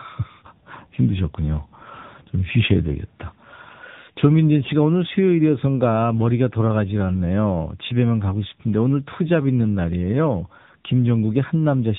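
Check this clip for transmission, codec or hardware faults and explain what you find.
One fault runs through the whole clip: tandem speech coding. The speech was decoded and re-encoded at successive codec boundaries, each stage degrading the last stage's output. Nothing reaches above 3.8 kHz, and the rough, warbly texture fits CVSD feeding a low-rate AMR-NB stage near 8 kbit/s.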